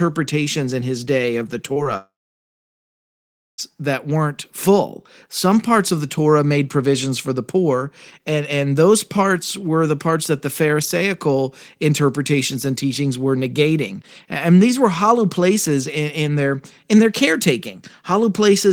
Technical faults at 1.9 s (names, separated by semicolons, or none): short concealed packet loss; long network dropout